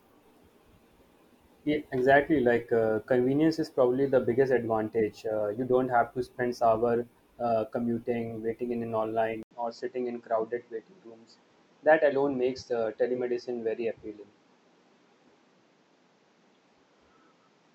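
At 9.43 s the speech drops out for 80 ms, then returns duller and around 5 dB quieter until the end, with nothing above 7.8 kHz and a faint new background noise beneath it. This is likely an input switched to a poorer device.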